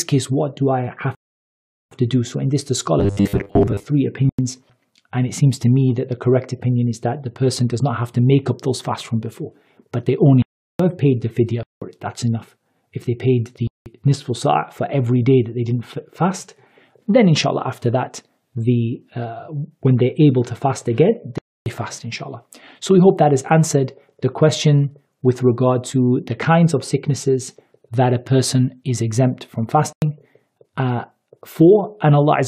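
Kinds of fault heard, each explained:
Rebuffering stall: at 1.15 s the sound drops to silence for about 0.76 s, then resumes exactly where it stopped, because playback ran out of downloaded data.
Robotic sound from repeated short buffers: 2.99 to 3.86 s becomes a rigid, metallic 100 Hz buzz, likely from the last 10 ms being looped while most real audio is skipped.
Block of digital silence: six abrupt holes, 93 to 372 ms long, where whole blocks of samples, apparently multiples of 4096, were replaced by zeros.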